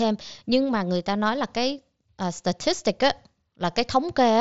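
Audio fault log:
Nothing to log here; the speech comes through a Bluetooth mSBC headset codec working as it should, with the sound stopping a little under 8 kHz and only the faint grain that codec leaves on louder moments.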